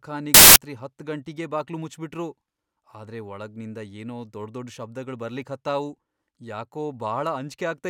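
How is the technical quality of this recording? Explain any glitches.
The recording has one glitch, near the start. From 0.34 to 0.56 s, samples built from the wrong bytes: each sample's bytes were misassembled, so the fast-changing low bits dominate, giving a burst of loud, harsh broadband noise just before "ಹತ್ತ್ ಗಂಟಿಗೇ ಬಾಕ್ಲು ಮುಚ್ಬಿಟ್ರು".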